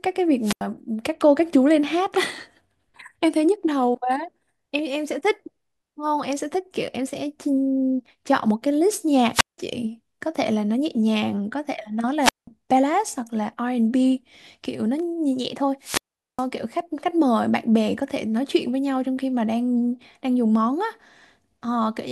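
A speech clip with hiss swelling into near-silent holes of about 84, 175, 186 and 413 ms at 0.41, 9.32, 12.21 and 15.81 s: wireless microphone squelch dropouts, the fading radio signal triggering the receiver's mute.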